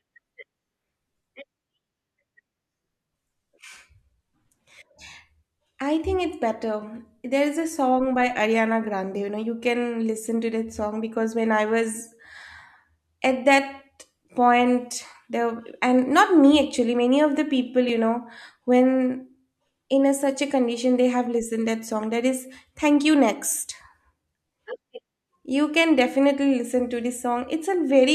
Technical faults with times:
17.89 block of digital silence

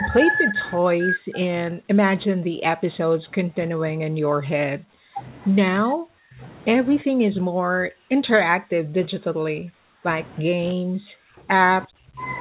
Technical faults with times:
0.00-5.19 speech suppressed in double talk
5.84-6.42 speech suppressed in double talk
7.03-10.04 speech suppressed in double talk
10.42-11.48 speech suppressed in double talk
11.85-12.21 speech suppressed in double talk

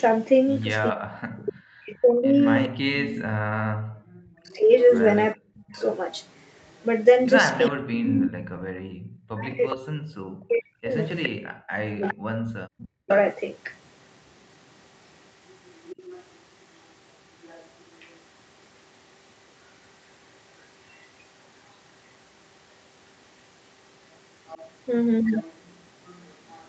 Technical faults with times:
0.00-2.69 echo leak
0.91-5.76 speech suppressed in double talk
4.78-13.13 echo leak
7.71-13.10 speech suppressed in double talk
11.32-11.43 background gated by the echo canceller
15.87-18.16 echo leak
20.88-21.03 echo leak
24.48-26.68 echo leak

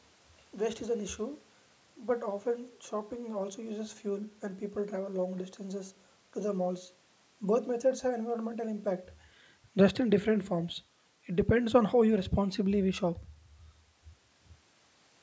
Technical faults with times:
none

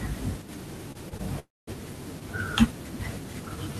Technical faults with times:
0.42-0.49 one channel drops out
0.89-1.21 repeated stalls (stutter)
1.39-1.69 call audio freeze

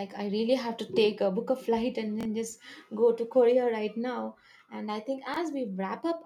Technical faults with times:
2.21-2.25 chunks out of order
5.27-5.36 chunks out of order

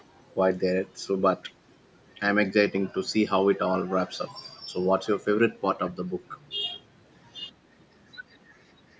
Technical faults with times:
1.42-1.53 echo leak

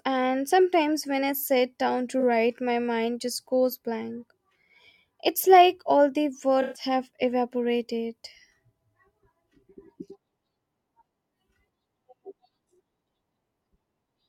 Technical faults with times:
2.20-2.23 AAC frame loss with concealment
6.62-6.82 AAC frame loss with concealment

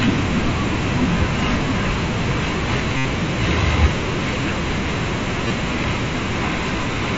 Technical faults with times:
1.18 concealed Bluetooth headset packet loss
2.97-3.05 concealed Bluetooth headset packet loss
5.48-5.50 concealed Bluetooth headset packet loss
6.77 concealed Bluetooth headset packet loss

